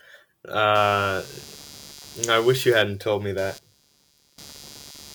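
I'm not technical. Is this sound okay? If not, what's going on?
No. From about 0.75 s right through to the end, there's a faint buzzy, scratchy layer under the speech. That's computer activity noise. When the computer's processor, graphics card or even the mouse gets busy, it disturbs the electrical ground the audio gear shares, and that leaks into the recording. Here it pulses at roughly 150 times a second, and it's quieter than the speech but clearly there. It rises and falls with the computer's workload, not with the talking.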